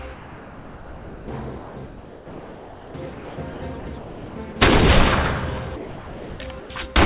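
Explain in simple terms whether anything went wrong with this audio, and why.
Something went wrong in the sending side's voice detector, which decides when there is sound worth sending. Three related faults follow from it.

Comfort noise in place of the background, from 0.14 to 1.28 s and again from 5.76 to 6.7 s: the sender likely judged these stretches to be silence and stopped sending. The receiver filled each gap with invented, even hiss. The real background is replaced by a flat noise, slightly quieter in the first stretch.

Sound chopped by the voice detector, from 1.58 to 4.56 s: the detector likely kept switching sending off and on. About two seconds of that stretch were swapped for filler noise, so quiet parts and edges of the sound disappear.

Sound dropped by the voice detector, from 5.76 to 6.4 s: some sound was likely mistaken for background, and the sender stopped sending. 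About half a second of actual sound is lost and replaced by steady noise until sending resumes. The call link itself carries nothing above 4 kHz, so the audio sounds narrow, like a phone line.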